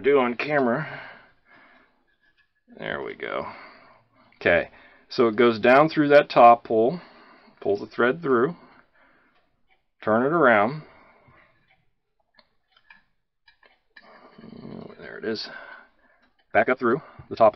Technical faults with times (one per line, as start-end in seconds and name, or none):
16.04-17.55 time-stretched section